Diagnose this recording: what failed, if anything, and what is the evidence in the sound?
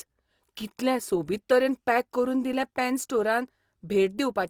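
The failure is at the codec stage and runs throughout the speech. The audio has a grainy, rough, noisy texture while the bandwidth stays full, reaching about 20.3 kHz, which points to Opus compression, likely in CELT mode at around 24 kbps, filling starved bands with folded or noise energy.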